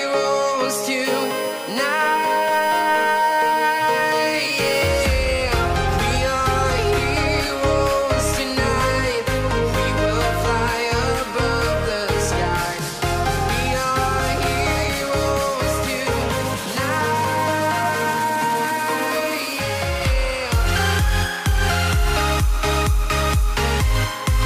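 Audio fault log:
1.05 to 4.88 s: USB whine. A steady, fixed-pitch tone sits under the sound for nearly four seconds. Its base is 1 kHz, but the strongest part is the harmonic at 3 kHz, which gives it a thin, piercing edge. It runs at roughly 15 dB below the signal, so it is plainly audible. The USB bus draws current in 1 ms frames. That pulsing leaks into the audio through power or ground and becomes a whine at the frame rate and its multiples.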